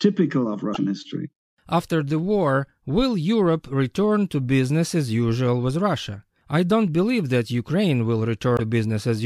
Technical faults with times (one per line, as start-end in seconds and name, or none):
0.72-0.77 damaged data in a compressed stream
8.56-8.60 damaged data in a compressed stream